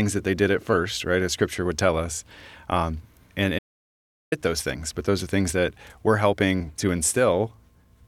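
Somewhere in the chain the input was likely lost, with the recorder writing silence in its place, producing an audio dropout to silence from 3.59 to 4.32 s. The speech cuts off abruptly into total silence, no room tone, and about 0.73 s of it is gone.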